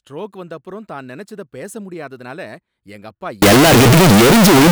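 Signed and unsigned mixed up, from 3.42 s to the end: the speech abruptly turns into very loud, harsh distortion, with quiet moments as loud as the rest. The likely cause is 16-bit samples read with the wrong sign convention, so every zero crossing jumps across the full range.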